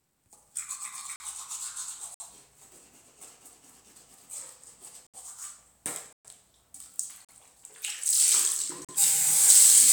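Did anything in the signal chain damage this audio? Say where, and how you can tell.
Yes. Blocks of digital silence occur at 1.16–1.20 s (40 ms), 2.14–2.20 s (57 ms), 5.07–5.14 s (70 ms), 6.13–6.25 s (120 ms), 7.25–7.29 s (40 ms) and 8.85–8.89 s (40 ms). The sound drops abruptly to silence and returns with no fade. The gaps are heard as short holes, the 120 ms one the longest. This points to the driver or buffer stage, where the output buffer was not filled in time.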